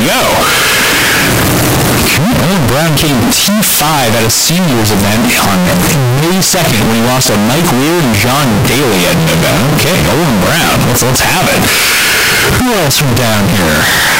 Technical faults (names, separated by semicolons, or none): signed and unsigned mixed up